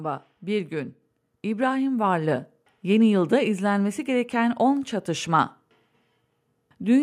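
At 1.02 s the microphone volume is stepped up by about 4 dB in a single jump: the input gain on the capture device is raised abruptly rather than ramped, so the speech and the background noise beneath it both become louder at the same instant.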